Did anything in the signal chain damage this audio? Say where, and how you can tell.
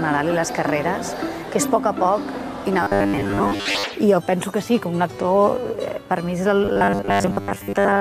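Yes, at the buffer stage: robotic sound from repeated short buffers at 2.83–3.84 s and again from 6.65 s to the end. The sound collapses into a rigid, metallic buzz fixed at 100 Hz, which fits a 10 ms buffer being looped while most of the real audio is skipped, likely because data arrived too slowly. Unlike plain dropouts, there are no silent gaps, just a constant imposed pitch that follows the original contour only roughly.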